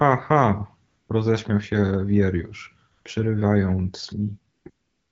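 A speech clip carried over an AMR wideband (HD Voice) phone link, whose light coding fits a mid-to-high rate of around 12.65 kbit/s, has AMR comfort noise in four pauses: 0.87 to 1.09 s, 2.91 to 3.05 s, 4.53 to 4.65 s, and from 4.69 s to the end. The phone judged these gaps silent and stopped sending speech frames. The receiver then filled each gap with smooth synthetic hiss matched only roughly to the background's level and spectrum. On a spectrogram these stretches show as flat, even noise bands with sharp edges. On a waveform they appear as uniform low-level fuzz.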